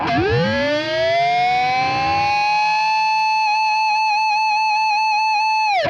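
Bit error spikes at 3.19 s and 4.46 s: a flipped bit in memory or on a digital link throws one sample, then two in a row, far off their true value before snapping back. Each is a single sharp broadband tick, about -25 dBFS then quieter at about -37 dBFS, unrelated to the surrounding sound.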